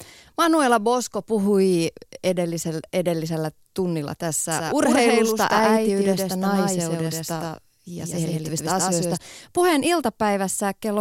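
Between 4.52 and 9.18 s, a second copy of the speech was likely picked up through a slower path, or held out of step by an edit, and mixed back in, giving a doubled audio track. The copy trails by about a tenth of a second at roughly the same level as the original, so every syllable is followed by a dry, full-band repeat with no room tail. The repeat cuts in and drops out abruptly at those two points.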